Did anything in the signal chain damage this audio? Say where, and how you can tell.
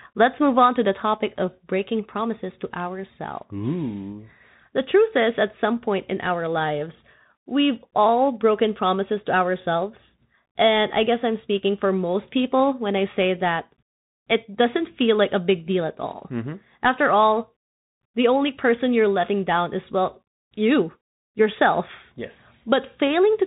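Yes: the codec stage. The speech carries Bluetooth CVSD headset codec damage throughout, with nothing above 3.8 kHz, scratchy s sounds and a granular hiss, which fits a one-bit 64 kbps delta coder whose adaptive step cannot keep pace with loud, fast-changing sound.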